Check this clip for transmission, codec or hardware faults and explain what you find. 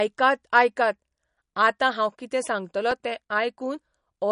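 There's one fault, running the whole way through: the speech carries MP3 compression damage, and it's plainly audible. Nothing comes through above 10.6 kHz, so the top end is sliced off flat. That, plus the watery, swirly texture, points to a likely MP3 encode starved of bits, which fits a low bitrate around 40 kbps. The encoder dropped the treble and let weak frequency lines blink on and off between frames.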